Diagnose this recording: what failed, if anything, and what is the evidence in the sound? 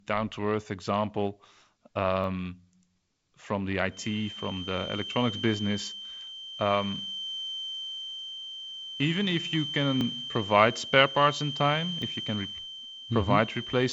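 Repeated buffer at the driver stage: clicks at 2.24, 10.01 and 12.02 s, each a 10 ms chunk played twice because fresh audio came late.

Feedback whistle from 3.87 s, just after "from the", to the end: a slowly swelling and fading 3.1 kHz tone about 10 dB down, likely a speaker-mic loop.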